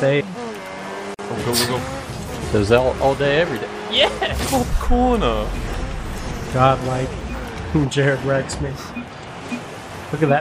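At 1.14 s there's a gap at a join of encoded pieces: the sound just drops out for about 46 ms, then picks up right where it left off. The edges are smeared by the codec. What's happened is that the audio was encoded in chunks, with the join recurring every 10.0 s, and stitched back together untrimmed, so one run's end padding and the next run's start-up silence both stayed in.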